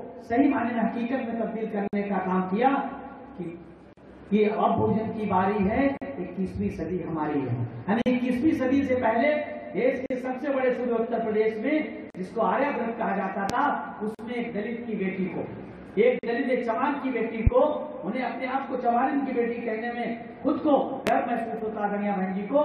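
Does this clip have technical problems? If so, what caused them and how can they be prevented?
Yes. Short silences cut into the continuous sound at 1.88, 3.93, 5.97, 8.02, 10.06, 12.10, 14.15 and 16.19 s, recurring every 2 s. The first lasts about 54 ms and the rest about 43 ms, each with abrupt, slightly smeared edges, before the sound resumes where it stopped. This is a gap at a join of encoded pieces: two-second sections were encoded separately, and each run's start-up delay and end padding were left in at the joins. To prevent it, trim encoder delay and padding before joining, or encode the audio as one continuous stream.

Sharp, loud pops sit on top of the sound at 13.50, 17.47 and 21.07 s, each a single brief burst around 20 dB above the surrounding level, with the sound continuing underneath. These loud pops are likely voltage transients from a plug, switch, static discharge or driver glitch entering the signal chain. 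To prevent them, secure connections, avoid switching or touching equipment while recording, and keep audio drivers stable.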